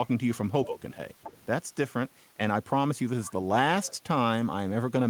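The echo canceller likely could not tell the talker's voice from loudspeaker echo while both sides spoke at once, so it turned the speech down. This speech suppressed in double talk shows as brief dips of about 10 dB from 0.66 to 0.77 s and again from 0.94 to 0.99 s. Further on, the canceller likely left part of the loudspeaker signal in the microphone feed. The other side's voice leaking through appears as a faint second voice from 1.22 to 1.46 s, then at 3.25 to 3.33 s and 3.86 to 3.96 s. It sits well below the talker and grows quieter with each return.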